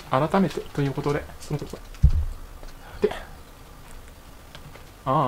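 From 1.46 s to the end, a time-stretched section runs about 1.52 times faster at unchanged pitch, sounding rushed, likely from pitch-preserving speed-up dropping short pieces; spectrogram harmonics stay level while events crowd together.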